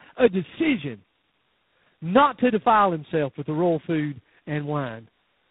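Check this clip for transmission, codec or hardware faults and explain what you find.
One fault is present across the whole clip.

Tandem speech coding, throughout: three speech coders in series each re-encode the previous one's damage, leaving speech rough, warbly, muffled and empty above 3.8 kHz.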